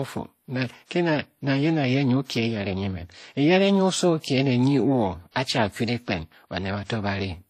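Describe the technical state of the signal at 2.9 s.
At 2.9 s, as throughout, there is likely transcoding between lossy codecs. The layered artefacts, heard together, point to HE-AAC re-encoded by WMA, each adding artefacts, with nothing above 14.8 kHz.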